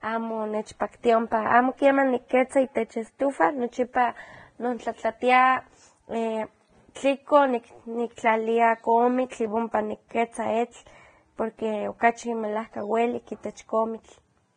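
Throughout the speech there is likely Vorbis compression at a low bitrate, around 20 kbps. Nothing reaches above 9.7 kHz, and the coarsely quantised treble turns into grainy hiss that roughens tones and blurs attacks. Unlike plain low-pass filtering, the remaining highs sound noisy rather than just dull.

From 3.93 to 3.95 s, pre-echo spreads about 21 ms of hiss ahead of a sharp attack. The codec's block-wide quantisation noise, sized for the loud onset, leaks into the quiet moment before it. It differs from a click or reverb because the smear comes before the onset, not after it.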